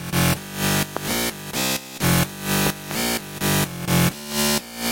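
Loud pops: a double pop from 0.97 to 1.13 s, another double pop from 2.67 to 2.93 s, and a single pop from 4.32 to 4.34 s. These are sharp thumps peaking about 15 dB above the sound (the last about 10 dB), likely voltage spikes from a switch, plug or static, while the audio continues underneath.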